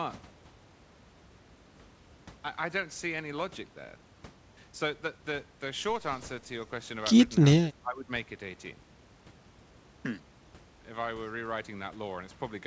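From 7.55 to 8.11 s the speech dips sharply, falling about 15 dB at its deepest. The loss lasts about half a second. This is likely speech suppressed in double talk. The echo canceller mistook this talker for far-end echo. It turned both down.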